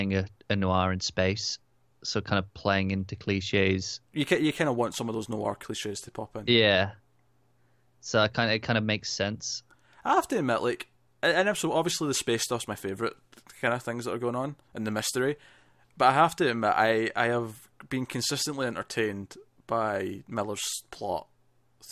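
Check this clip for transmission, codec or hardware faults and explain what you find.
Nothing audible on the speech points to a transmission, codec or hardware fault.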